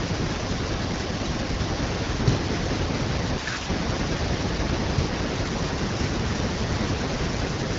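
No technical faults can be heard in this speech clip.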